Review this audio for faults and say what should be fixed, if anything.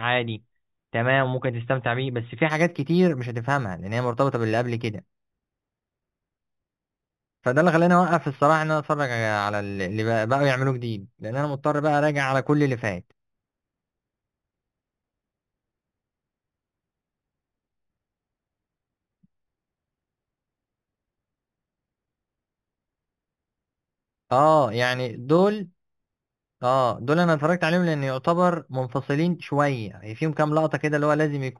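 Imaging from linear upsampling runs from 2.50 s to the end. Straight-line interpolation, consistent with an 8 kHz source raised to 44.1 kHz, leaves a mirrored image in the 4 to 8 kHz range, roughly 30 dB down, adding metallic shimmer to sibilants. Resample with a proper low-pass interpolation filter, such as windowed-sinc or polyphase, instead of linear interpolation.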